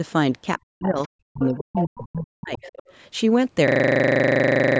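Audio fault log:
0.61–1.01 s and 1.34–2.68 s, speech suppressed in double talk: the talker's level collapses by as much as about 40 dB, with the second stretch gapping on and off for around a second in total. Both windows overlap with sound arriving from the far end, so the likely cause is the echo canceller failing to separate the near talker from the loudspeaker echo during simultaneous talk and attenuating everything it picked up, rather than only the echo.
1.03–1.08 s, 1.41–1.99 s and 2.56–2.91 s, other side's voice leaking through: a second, fainter voice sits under the clip, only a brief scrap at about 30 dB down at first, then a clearer stretch at only about 10 dB below the talker, then a tail at about 25 dB down. This is likely residual loudspeaker echo that the canceller did not fully subtract from the microphone.
3.68 s to the end, system hang loop: the same 40 ms fragment repeats exactly, 28 times at a steady 25 Hz, producing a rapid stutter that replaces about a second of audio. 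The sound hardware kept replaying one ring-buffer segment while the host or driver stopped supplying new data, which fits a buffer of roughly 40 ms. The bandwidth limit at 8 kHz from the call's microphone processing carries through the looped segment.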